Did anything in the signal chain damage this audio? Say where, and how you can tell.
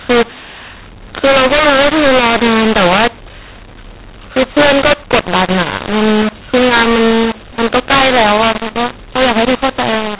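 Yes. The damage is at the codec's decode stage, and it runs the whole clip: a mu-law and A-law mix-up, where the A-law telephone stream, band-limited at 4 kHz by its 8 kHz sampling, is expanded with the mu-law table. Speech comes out harsh and grainy, and the pauses hiss instead of falling silent. On a waveform, quiet gaps sit well above zero and peak levels look unevenly scaled. A spectrogram shows broadband noise filling every pause up to the 4 kHz ceiling.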